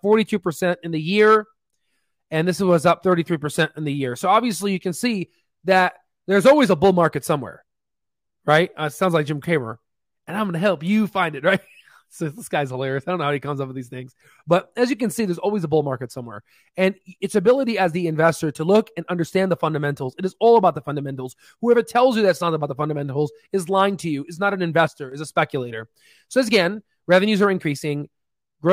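From 24.88 to 25.12 s the level falls abruptly by about 6 dB, then recovers. The likely cause is one channel dropping out ahead of the mono sum.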